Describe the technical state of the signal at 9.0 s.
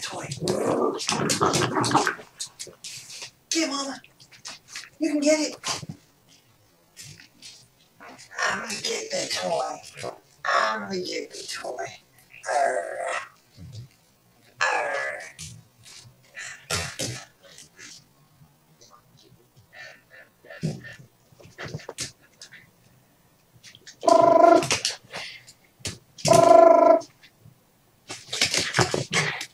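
At 9.0 s you're inside a time-stretched section that runs from about 5.91 s to 21.25 s. Playback there runs at roughly 0.53 times normal speed while the pitch holds steady, so the audio drags. That's likely software stretching the passage to fill a longer slot, repeating short slices of sound to pad it out rather than lowering the pitch.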